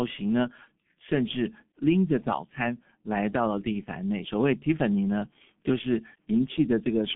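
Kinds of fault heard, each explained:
G.723.1 codec: a low-rate telephony coder, here around 6.3 kbit/s, leaving nothing above 3.6 kHz, so speech is muffled, hoarse, with smeared consonants.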